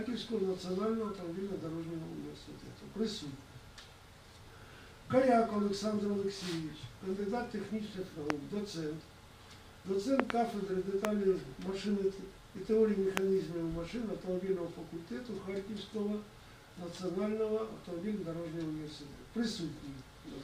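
Loud pops at 8.30 s, a double pop from 10.20 to 10.32 s, then 11.05 and 13.17 s. Sharp thumps well above the sound, likely from electrical switching or static.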